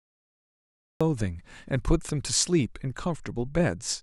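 For the first 1.01 s there is pure digital silence, and then the speech arrives already in progress at 1.01 s. This is a cut-off start: capture began late, so the opening of the sound was never recorded. It differs from a slow fade-in or a noise gate opening because there is no rising attack at all. Unlike a dropout, nothing is lost mid-stream. The gap sits only at the very beginning.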